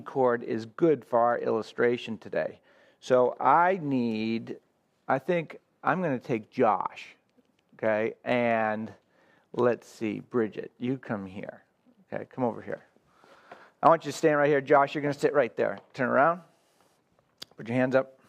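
Clock slip clicks run from 0.19 to 18.24 s: faint regular ticks about every 0.15 s, likely single-sample slips between unsynchronised clocks roughly 150 ppm apart.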